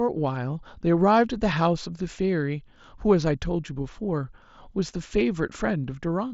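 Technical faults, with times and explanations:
No technical faults are audible.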